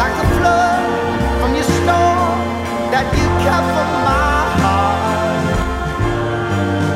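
From 5.62 s to the end, channel delay (comb filtering) sets in. One channel lags the other by about 20 ms, and in the mono sum the notches start near 30 Hz and repeat up the spectrum, making the sound rough or slightly doubled. Unlike flanging, the notches stay fixed, with no sweep.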